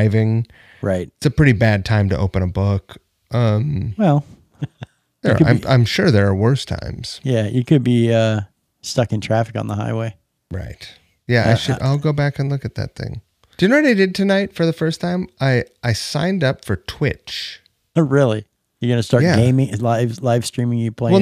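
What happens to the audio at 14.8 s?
At 14.8 s the speech continues without any audible fault; the audio is intact at that moment.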